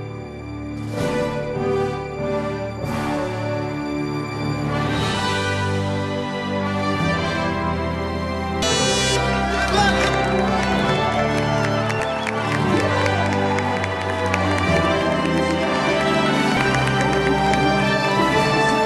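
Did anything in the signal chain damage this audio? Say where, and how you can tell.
Yes, it's at the codec or storage stage: compressed frames skipped. At 8.62, 11.99, 16.56 and 18.21 s the audio jumps ahead, losing roughly 150 to 200 ms each time. That fits short runs of 26.1 ms frames that were either missing from the file or rejected by the decoder.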